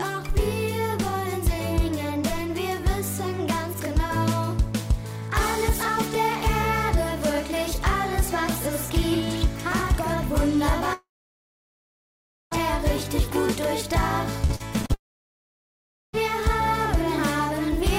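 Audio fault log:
10.93 to 12.53 s, long network dropout: about 1.6 s of audio never arrives. The receiver stretches the last sound into a brief fading buzz, then about 1.45 s of near silence follows before the audio resumes further along, with that stretch simply gone. The likely cause is a stall in the network stream. On a waveform the envelope collapses to a flat line. A spectrogram shows a short smeared tail, then an empty band until the signal returns abruptly.
14.46 to 14.94 s, repeated packet loss (robotic sound): five short holes, the longest 41 ms, fall within this half second, so about 29% of the span is patched rather than real. Each hole is filled by repeating the last sound, and the next follows quickly, giving a choppy texture with pieces missing. A spectrogram shows repeated vertical seams and smeared, copied-looking slices. On a waveform the envelope is broken by small discontinuities.
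14.94 to 16.15 s, long network dropout: right after the choppy stretch, about 1.2 s of audio is lost, again likely from an interruption in the network stream. A brief fading continuation gives way to about 1.15 s of near silence, and the sound comes back later without the missing part. On a waveform this is a flat gap following the jagged section. A spectrogram shows a blank region between the seamed stretch and the sudden return of energy.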